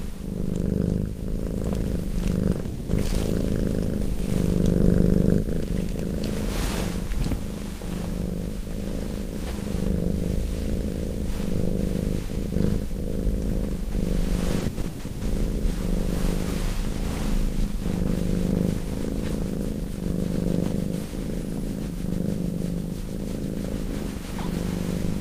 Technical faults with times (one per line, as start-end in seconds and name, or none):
2.53-2.67 short concealed packet loss
2.67-2.91 long network dropout
14.59-15.23 repeated packet loss (robotic sound)